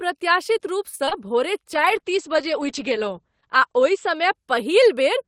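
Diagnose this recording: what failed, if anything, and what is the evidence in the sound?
At 0.95 s the speech briefly hangs, a sound held unnaturally long for about 40 ms with a faint buzz or dip until 1.01 s, after which it resumes with nothing skipped. This is a short stall from a late packet, at the network and jitter-buffer stage. A packet arrived late, the buffer ran dry, and the receiver stretched the last sound by 38 ms before continuing from the same point. Playback sits 38 ms later from then on.

Right after, from 1.05 to 1.13 s, there is a brief smear and wobble. These are two consecutive short concealed packet losses, also at the network stage, the first at 1.05 s and the second at 1.09 s. Each lost about 20 ms of audio. The decoder covered each gap by extending the preceding sound for roughly 19 ms and then crossfading back into real audio.

From 1.75 s until 5.11 s the speech turns rough and muffled, losing its crisp top end and taking on a coarse, slightly watery texture. 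This is a call bitrate drop at the codec stage. The bandwidth estimate fell, and the encoder was pushed from 32 to 10 kbps, staying at the lowest rate for about 1.8 s. At that rate the coded bandwidth shrinks from 20 kHz to 8 kHz, which explains the dulled highs.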